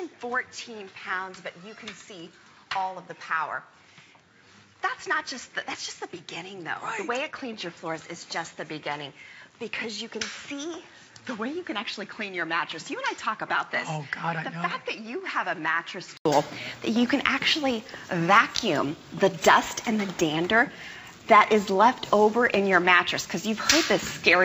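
The input was likely routed through a poorer device from the start until 16.25 s, when it switched to a better one. Until then the sound carries nothing above 7.6 kHz, sits about 10 dB lower, and has its own background noise roughly 40 dB below the signal. At the input switch to a better device there is an 80 ms silence, after which the sound turns brighter and louder.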